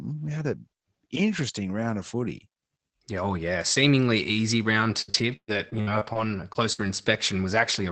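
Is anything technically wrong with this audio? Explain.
Yes. Repeated packet loss (robotic sound) runs from 5.01 to 6.88 s, just after "easy round." Nine holes, the longest 118 ms, are patched by stretching the preceding sound, so about a fifth of the span turns choppy, with pieces missing.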